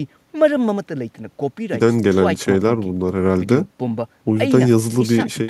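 No technical fault can be heard anywhere in the recording, and the signal stays intact and continuous for its whole duration.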